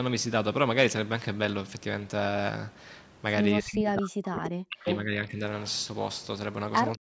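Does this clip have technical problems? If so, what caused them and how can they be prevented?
Yes. Speech suppressed in double talk from 3.59 to 5.42 s and again from 6.96 s to the end: the talker drops by up to about 40 dB, in pieces totalling roughly 1.6 seconds, likely because an echo canceller confused the talker with far-end loudspeaker echo while both spoke. Better echo-canceller double-talk detection, or a headset, prevents this.

Echo leak from 4.85 to 4.97 s: a brief copy of the voice returns 312 ms late, only about 5 dB below the speech, likely residual loudspeaker echo the far side's canceller missed. Headphones on the loudspeaker side, or a stronger echo canceller there, prevent this.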